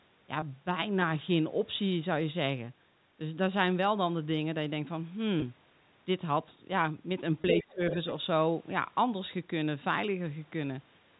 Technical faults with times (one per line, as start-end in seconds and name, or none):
0.40-0.42 packet loss with pitch repetition
5.40-5.42 packet loss with pitch repetition
7.42-7.44 packet loss with pitch repetition
7.55-7.64 other side's voice leaking through
7.63-7.82 speech suppressed in double talk
7.90-8.13 other side's voice leaking through